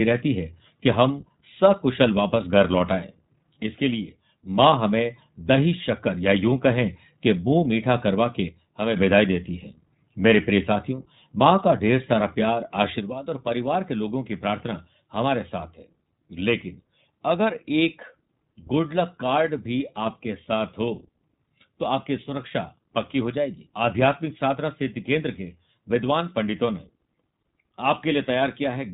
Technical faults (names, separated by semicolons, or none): iLBC codec